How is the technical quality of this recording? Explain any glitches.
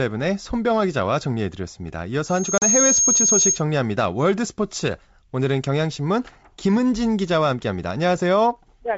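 Two glitches overlap early in the recording, both carried over a G.722 wideband call at 64 kbit/s.

From 2.27 to 3.63 s there is loudspeaker feedback squeal. A steady 6.5 kHz tone swells over roughly 0.4 s to about 5 dB above the speech, as the microphone re-amplifies its own loudspeaker. A pure self-sustaining tone like this is different from broadband hiss.

Between 2.58 and 2.65 s, packet loss on the ADPCM call leaves a hard-edged 40 ms gap, which fits a couple of lost packets. The decoder's predictor then briefly resumes out of step, so the sound returns slightly distorted rather than with a clean fade.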